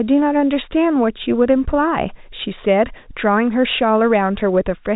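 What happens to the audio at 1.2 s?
Nothing goes wrong at 1.2 s: the speech passes through intact, with only the narrow band of ordinary G.711 telephone coding, which cuts everything above about 3.8 kHz.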